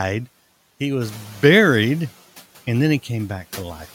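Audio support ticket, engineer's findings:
Noise suppressor catching up, 1.01–2.04 s. Room noise jumps about 11 dB near 1 s; the suppressor's noise estimate lags, passing it under-reduced, then cutting it about 7 dB over 1.03 s. Noise settles about 21 dB below speech.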